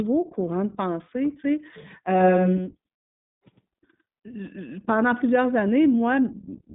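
Throughout the recording the speech carries the sound of the iLBC codec, a narrowband VoIP coder that encodes each short frame's excitation independently. The voice is clear but noticeably rough and synthetic, with a slightly buzzy grain that fits 20 ms frames at around 15.2 kbps. On a spectrogram the energy sits in a band from about 150 Hz to 3.7 kHz, with nothing at all above 3.8 kHz, so the upper part of the display is flat and empty.

From 2.17 s to 4.47 s a doubled audio track appears. A second, full-band copy of the speech trails the original by roughly a tenth of a second and sits a few dB lower, giving a flat slapback with no reverberant tail or room colouring. It switches on and off abruptly at those times. The likely cause is the same audio being captured twice through a slower path, or an edit leaving two copies out of step. In the waveform, each syllable's envelope is followed by a duplicate about 5 dB lower about 100 ms later. 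On a spectrogram, every harmonic pattern appears twice, the second copy about 5 dB weaker and shifted right by the same fixed amount.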